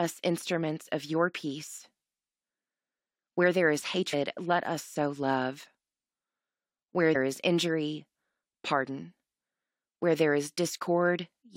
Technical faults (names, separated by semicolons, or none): damaged data in a compressed stream